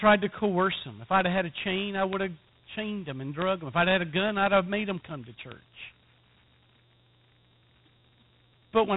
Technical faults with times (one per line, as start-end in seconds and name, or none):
0.00-8.97 Dialogic VOX ADPCM
1.21 bit error spike
2.13 bit error spike
3.42 bit error spike
4.47 bit error spike
5.52 bit error spike